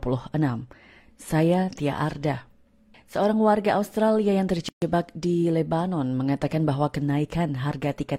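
At 4.69 s the sound drops into a silence of 133 ms, ending at 4.82 s, with smeared edges before it resumes where it stopped. This is a gap at a join of encoded pieces: separately encoded segments were spliced without trimming their start delay and end padding.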